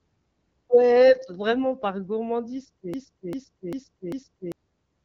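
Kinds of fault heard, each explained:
Broken-record loop: A short piece of the speech, about 0.40 s long, plays four times in a row without a gap. It runs from 2.94 s to 4.52 s. The repeats are exact copies, so the sound seems stuck in place. Whatever should have been heard during that stretch never arrives. The likely cause is a stall in the player, encoder or stream, which kept sending the last fragment it still held.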